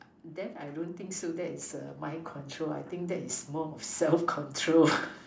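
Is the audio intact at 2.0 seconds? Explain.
No. At 2.0 seconds the clip is inside a span of automatic gain rising that runs from 0.35 to 2.38 s. The automatic gain control judged the incoming level too low and raised its gain step by step, about 7 dB in total across those two seconds. Because the gain acts on the whole signal, the speech and the background noise swell together, so the level climbs audibly rather than staying steady.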